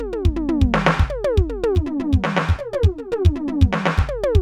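From 1.75 s to 3.99 s the music turns hollow and phasey. This is channel delay with comb filtering. One channel runs late by roughly 10 ms, and the two channels are then summed to mono. Material common to both cancels at evenly spaced frequencies. The first notch sits at around 50 Hz, and further notches follow about every 100 Hz. The result has a fixed, combed coloration.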